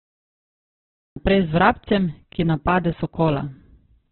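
Digital silence runs from 0 to 1.16 s, then the speech bursts in mid-sound with no attack: a cut-off start, from a recording that began late. Throughout, the speech is muffled, rough and grainy, with nothing above about 4.2 kHz. This is likely heavy Opus compression at a very low bitrate, consistent with around 8 kbps.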